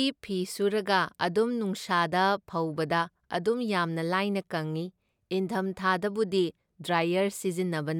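Nothing technical goes wrong anywhere in this bit of speech, so there's nothing here to flag.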